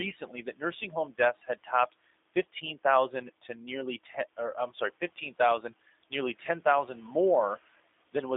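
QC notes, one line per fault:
throughout: G.729 codec. Speech is rebuilt from a filter, pitch predictor and few pulses, consistent with 8 kbit/s, so it sounds rough and synthetic, band-limited to 250 Hz to 3.6 kHz.
1.44 to 1.69 s: speech cut by the noise suppressor. Just after "that nursing home deaths", the suppressor mistook speech for noise, ducking about a tenth of a second by about 12 dB, so it sounds swallowed.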